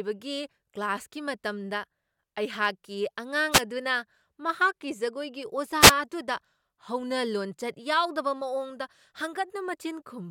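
At 3.51 to 3.61 s and again at 5.80 to 5.92 s, a wireless microphone noise hit breaks into the speech: the analogue FM radio link fades as reflections cancel, and receiver noise surges as a brief static swish, unlike a digital dropout's abrupt silence.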